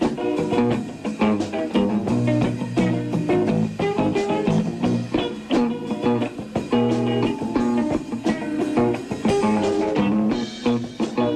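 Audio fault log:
No faults are heard in the clip. There is nothing to log at any point in the audio.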